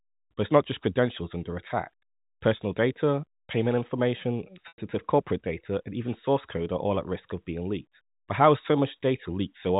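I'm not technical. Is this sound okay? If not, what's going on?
No. At 4.68 to 4.78 seconds there is packet loss with pitch repetition. About a tenth of a second of speech went missing. The phone repeated the last bit of voice, so you hear a brief buzzy hold fading toward silence rather than a sudden hard gap or click.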